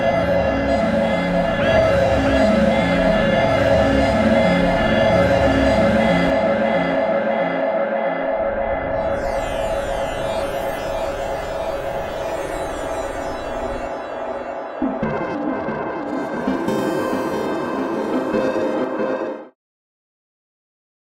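No technical faults are audible; the level eases down smoothly from around 19 s to 19.56 s with no click or hard edge.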